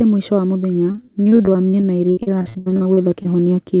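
After "mũico wa mũthenya", from 0.92 to 3.27 s, repeated packet loss leaves frequent gaps up to 75 ms. Patching them gives choppy, robotic speech, unlike a single dropout.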